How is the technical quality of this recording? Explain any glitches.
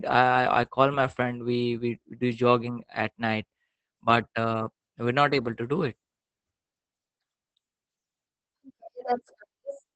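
The speech is audibly degraded by low-bitrate voice compression throughout.

Opus voice compression runs the whole way through. The SILK coder's linear prediction cuts off near 8 kHz and quantises the excitation coarsely, as a low bitrate around 12 kbps would. The result is muffled, hoarse and faintly robotic speech.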